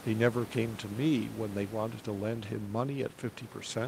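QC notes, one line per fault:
No faults to note.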